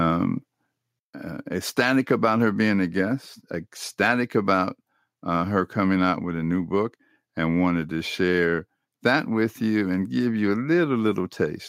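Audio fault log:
No fault detected anywhere in this speech clip.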